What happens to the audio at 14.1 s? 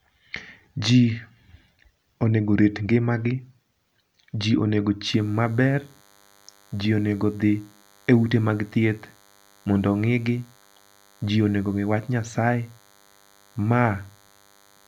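At 14.1 s a DECT cordless phone buzz sits under the speech. It starts at 5.06 s and runs to the end of the clip. A nearby DECT handset or base transmits a brief radio burst every 10 ms, and the audio circuitry rectifies it, producing a thin, steady buzz at 100 Hz, roughly 35 dB below the speech. On a spectrogram it shows as evenly spaced horizontal lines at 100 Hz and its many harmonics. In a quiet passage of the waveform it appears as a regular pulse train every 10 ms.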